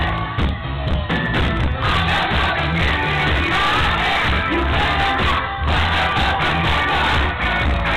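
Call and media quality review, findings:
No audible faults found.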